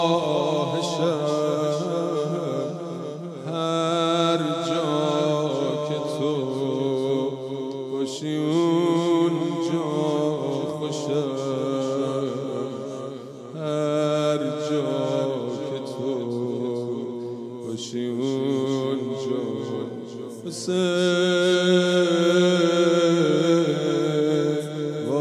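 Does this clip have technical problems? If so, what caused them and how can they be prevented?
No, nothing in the clip points to a technical fault, so there is no cause to trace and nothing to prevent.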